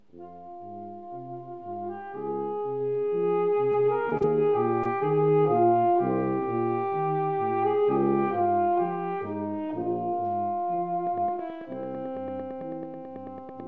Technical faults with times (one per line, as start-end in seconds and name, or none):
3.72-4.25 repeated packet loss (robotic sound)
4.83-4.87 short concealed packet loss
11.07-13.67 train of clicks